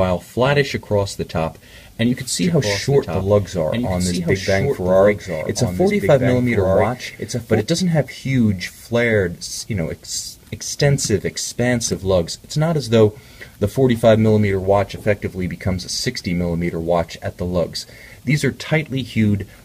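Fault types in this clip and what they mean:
Doubled audio track: from 2.42 s to 7.60 s a full-band copy of the sound trails about one and a half seconds behind, roughly 5 dB quieter, dry and cutting in and out abruptly. Likely cause: a slower second capture path, or an edit holding two offset copies.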